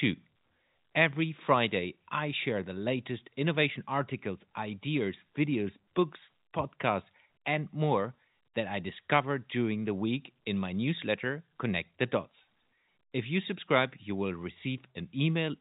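No faults can be heard in the speech, which carries the band limit of G.711 A-law telephone coding, with nothing above about 3.8 kHz and at most a faint trace of the format's level-following quantisation noise.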